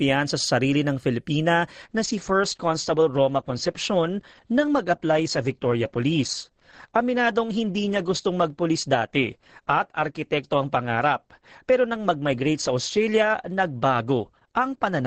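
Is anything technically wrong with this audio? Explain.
Yes. From about 1.82 s to the end, this speech clip shows an adaptive stream at a lower bitrate: the player switched to a cheaper version of the stream, likely because the connection slowed. The switch is abrupt, with no gap. After it, nothing is left above 9 kHz, so the top end goes dull, with more codec smearing. That's consistent with Opus dropping from around 64 kbit/s to around 12 kbit/s.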